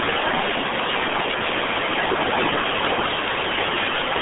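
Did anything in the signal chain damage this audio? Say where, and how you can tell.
Yes, at the codec stage. The speech went through a RealAudio 14.4 codec, and the sound fits an 8 kbit/s budget. Throughout, nothing survives above 3.8 kHz, and the band sits near 200 Hz to 3.5 kHz. Heavy coding damage leaves the speech muffled and gargly.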